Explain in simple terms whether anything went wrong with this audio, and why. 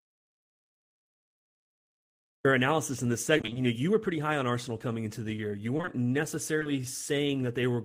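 Audio dropout to silence runs from the very start to about 2.4 s, ending just before "analysis in this". The gap is dead silence with no room sound at all, most likely because the input was lost, through a disconnected device or mute, while recording carried on writing nothing.

Repeated packet loss (robotic sound) follows from 3.37 to 3.57 s, between "analysis in this" and "know you were pretty". Several short chunks of the call, each about 20 ms at most, went missing in quick succession. Half of that stretch is patched by stretching the previous sound, giving a choppy texture.

Short concealed packet loss occurs in two brief clusters, at 5.77, 5.81 and 5.85 s, then at 6.59 and 6.63 s. Each time about 20 ms of audio failed to arrive, and the receiver filled it by continuing the last sound, leaving a tiny smear or wobble.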